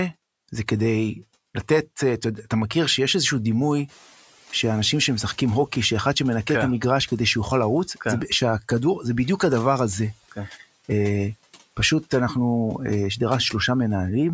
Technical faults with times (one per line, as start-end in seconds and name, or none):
3.88-5.61 noise suppressor catching up